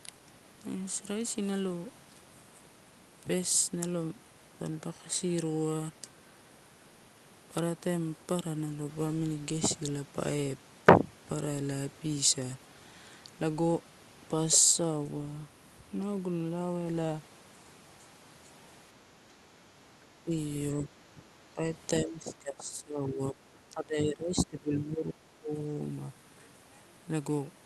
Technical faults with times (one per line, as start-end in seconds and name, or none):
20.24-20.34 speech suppressed in double talk
21.15-21.28 speech suppressed in double talk
21.54-21.64 speech suppressed in double talk
22.00-25.52 speech suppressed in double talk